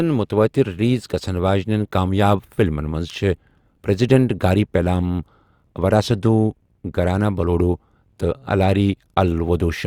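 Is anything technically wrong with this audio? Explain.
No, nothing technically wrong can be heard in this speech recording; the signal stays intact and stable throughout.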